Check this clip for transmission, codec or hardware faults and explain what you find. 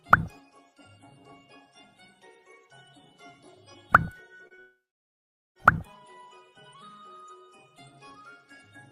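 There are transmission faults, clustered between 4.47 and 5.57 s.

Short concealed packet loss at 4.47 to 4.52 s and 4.54 to 4.60 s: twice, about 40 ms of audio missed the decoder, which patched each gap by extending the preceding sound for roughly 30 ms before blending back. Each is heard as a brief smear or wobble.

Long network dropout from 4.60 to 5.57 s: the likely cause is a stall in which nearly a second of audio never arrived. The receiver carries the last sound on briefly as a fading buzz or hiss, then about 0.81 s of near-silence follows before the audio resumes with that stretch gone.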